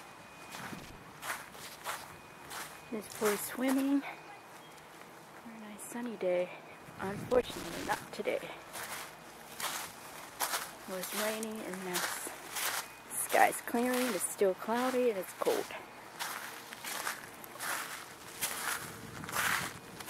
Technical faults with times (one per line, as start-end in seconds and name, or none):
0.78-0.95 loose connector crackle
7.31-8.03 loose connector crackle